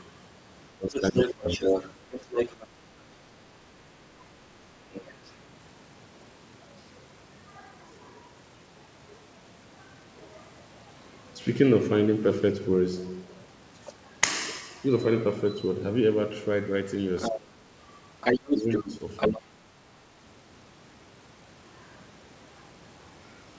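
At 0.77 s, two people talking at once likely confused the echo canceller, which could not tell the local talker from the loudspeaker echo and turned both down. This is speech suppressed in double talk: until 1.62 s the speech dips by up to about 20 dB in broken pieces, less than half a second in total. The same pumping returns from 17.31 to 17.66 s and from 18.59 to 19.64 s. Each time, the local voice thins and drops out while the far side speaks.

Overlapping the first dip, from 0.94 to 2.67 s, the other side's voice leaks through, likely because the canceller left part of the loudspeaker signal in the microphone. It sits at about the same level as the speech. Shorter, quieter leaks follow at 4.93 to 5.32 s, about 15 dB down, and at 17.17 to 17.32 s, about 5 dB down. A loud leak returns from 18.21 to 19.39 s and collides with the third dip. The band stops near 8 kHz, which fits a G.722 call path.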